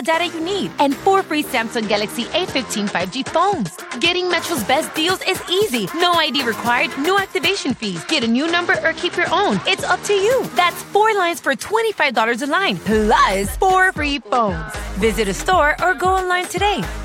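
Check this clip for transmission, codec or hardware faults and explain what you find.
Three Bluetooth SBC bit pool drops occur, at 1.69 to 4.39 s, 7.48 to 10.24 s and 13.97 to 14.79 s. In each, the sound turns dull and gritty as the link starves the encoder, which fits a bit pool falling from 28 to 10, near 84 kbps. The upper sub-bands lose their bits while the remaining bands are coarsely quantised. On a spectrogram the treble is abruptly cut off and grainy noise fills the lower bands, with full bandwidth returning sharply once each drop ends.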